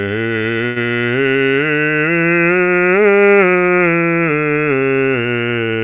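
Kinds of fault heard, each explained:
Short stall from a late packet: one packet of this music arrived too late, the jitter buffer ran dry, and the receiver stretched the last sound from 0.66 to 0.78 s, about 99 ms, before resuming where it stopped. Nothing is lost, but a held, faintly buzzy smear is heard and everything after it sits 99 ms later. On a spectrogram, already band-limited to 4 kHz by the G.711 call path, the harmonics run flat and smeared; the waveform shows a repeating, slightly dipped stretch.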